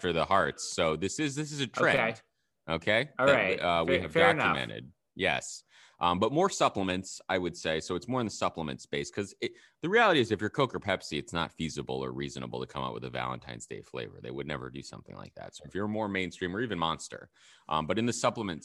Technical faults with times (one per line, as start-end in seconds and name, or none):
none